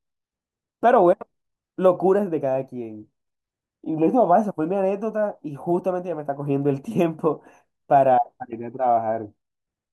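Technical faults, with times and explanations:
No technical faults can be heard in this speech recording.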